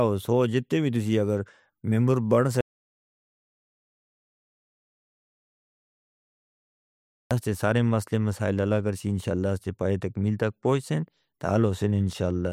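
Right after "تسی اگر ممبر بن", at 2.61 s, there's an audio dropout to silence, dead silence with no room tone until 7.31 s, likely a lost input link.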